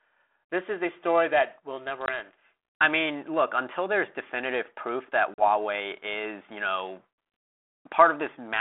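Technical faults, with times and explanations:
2.06–2.10 s and 5.34–5.44 s, packet loss on an ADPCM call: about one then two packets went missing on the 32 kbit/s G.726 link, leaving 20 ms and 40 ms silent holes after "story that will never" and "there's definitive proof that"; the decoder's predictor and step size lose track, so speech resumes briefly slightly distorted.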